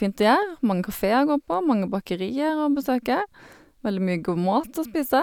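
No dropouts, clipping, glitches or other transmission faults are audible anywhere in this speech recording.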